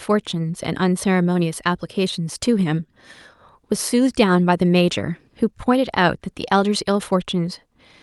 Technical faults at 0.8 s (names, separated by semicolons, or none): none